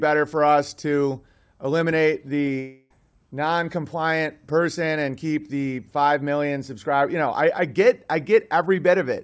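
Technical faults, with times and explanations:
2.60–2.93 s, long network dropout: right after "for us to eliminate", the audio stops arriving for about 0.3 s. The receiver fills the gap by stretching the last sound into a fading buzz. The missing stretch never returns, most likely from lost packets.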